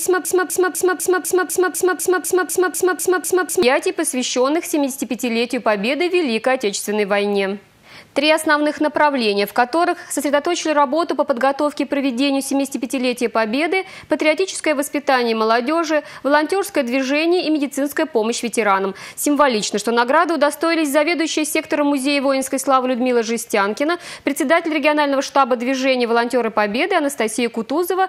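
A stalled stream likely kept resending its last fragment, so a broken-record loop repeats one 0.25 s piece back to back from the start until 3.63 s.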